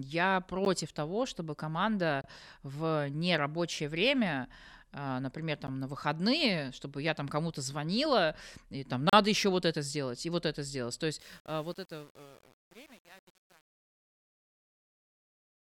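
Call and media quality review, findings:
Block of digital silence, four dropouts in speech: 0.65 s (about 12 ms, before "того чтобы"), 2.21–2.24 s (before "в нерабочее время а"), 5.67 s (about 12 ms), 9.09–9.13 s (between "звонила и там" and "еще вот это сделать"). Probable output-buffer underrun; 12 ms gaps fit a 512-sample buffer.

Truncation distortion on a fade, 11.2 s to end: the fade-out starting around 11 s turns gritty as level drops. Probable undithered gain stage; the coarse stepping fits 8-bit resolution.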